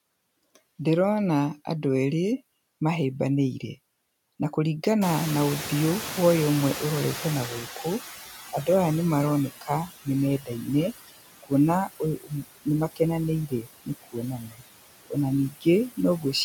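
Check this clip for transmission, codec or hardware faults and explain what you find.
The speech carries noise suppressor artifacts, a lagging suppressor and speech cut by the suppressor. No transmission or codec fault is evident.

Noise suppressor artifacts, throughout: the suppressor cuts bands it judges to be noise by about 18 dB per frame, so the noise sinks between the words and rises under them. A spectrogram shows speckled, flickering background between words.

Noise suppressor catching up, 5.01 to 9.49 s: the room noise jumps by about 22 dB at 5.0 s, and the suppressor's estimate takes 4.48 s to adapt. The noise passes with only about 13 dB of reduction before sinking. The waveform shows a raised noise floor that slowly shrinks.

Speech cut by the noise suppressor, at 9.61 to 10.07, 10.4 to 10.68, 12.0 to 13.0, 13.48 to 14.62 and 15.51 to 16.34 s: the suppressor mistakes soft speech for noise and drops it by about 15 to 18 dB. 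Short stretches, from a brief instant up to nearly half a second each, sound swallowed. They appear as sudden dark gaps in the spectrogram and pinched waveform envelopes.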